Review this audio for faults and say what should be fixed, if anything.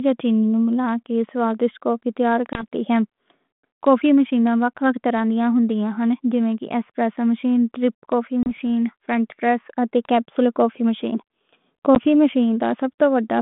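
Packet loss on an ADPCM call produces three hard-edged silent holes: about 20 ms at 2.53 s after "کے سوادشت کوفی تیار", about 30 ms at 8.43 s after "ایسپریسو مشین ڈرِپ کوفی", and about 10 ms at 11.95 s. Each hole corresponds to roughly one to three lost packets. Because the 32 kbit/s G.726 decoder's predictor and step size lose track of the sender's, the speech resumes slightly distorted. It re-locks within a few tens of milliseconds, by about 2.63 s after the first gap. To prevent this, add a jitter buffer with packet loss concealment and a decoder state reset or resynchronisation after each gap, and fix the link's loss at its source.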